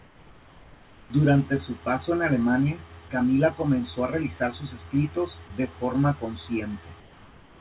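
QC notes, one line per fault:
0.0–1.1 s and 7.0–7.61 s, comfort noise in place of the background: the room tone turns into a steady, featureless hiss, about 4 dB and 3 dB quieter. The likely cause is receiver fill during discontinuous transmission. A spectrogram shows smooth, uniform texture below the 4 kHz edge, and the waveform shows a flat, even floor.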